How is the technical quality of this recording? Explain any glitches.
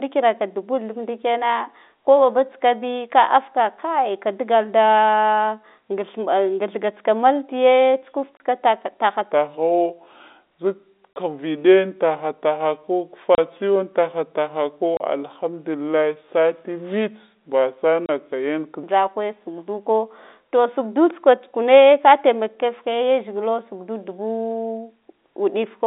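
The recording has two distinct problems: short dropouts from lost packets, and a long stretch played back too slowly, all carried over a telephone-band G.711 link.

Packet loss filled with silence occurs at 8.37, 11.13, 13.35, 14.97 and 18.06 s. At each point the receiver got nothing and inserted silence, leaving a 30 ms gap that fits a single lost packet. Each hole has hard edges on either side.

A section at the wrong speed runs from 9.32 to 18.83 s. The audio plays at 0.726 times its original rate, likely because a player or editor used a mismatched clock. The speech becomes slow and drawn out, and its pitch drops by about five semitones, so it sounds noticeably deeper.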